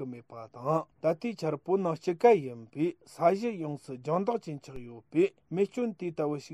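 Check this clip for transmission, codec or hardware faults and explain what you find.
One fault stands out. At 4.76 s there is a DC step. The waveform's zero line abruptly jumps to an offset of about -34 dBFS. It then decays away, as a 5 Hz high-pass would drain it. The sudden shift is heard as one low thump. The sound itself continues unchanged.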